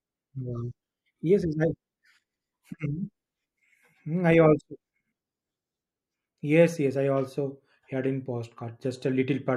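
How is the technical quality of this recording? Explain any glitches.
Nothing stood out as a technical problem on listening to this recording.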